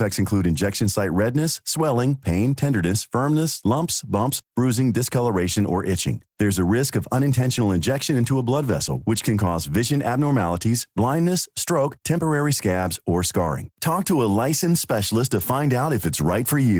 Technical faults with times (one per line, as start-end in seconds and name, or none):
0.00-16.79 Opus voice compression